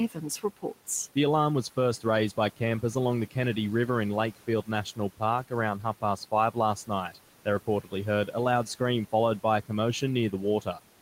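From 7.67 to 7.93 s, just before "heard a loud scream", speech cut by the noise suppressor turns faint sound down about 12 dB along with the background, rather than silencing it like a dropout.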